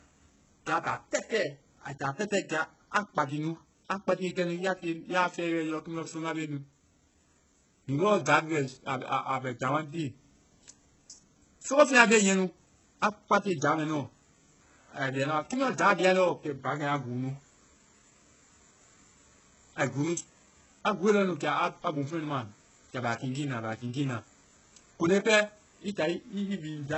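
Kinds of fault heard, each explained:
Low-bitrate audio saved at a high bitrate: the speech stops dead at 8 kHz and keeps the smeared texture of very heavy compression, likely from a starved original re-encoded as high-bitrate MP3. Unlike plain low-bitrate coding, the second pass adds almost nothing and restores nothing.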